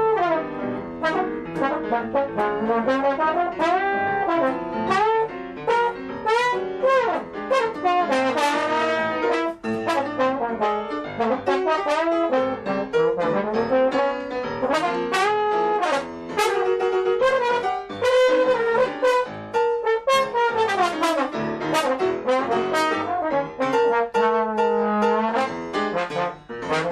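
No technical fault can be heard anywhere in this audio. Nothing in it breaks, drops out or shifts in a way that points to a problem in the recording or playback chain.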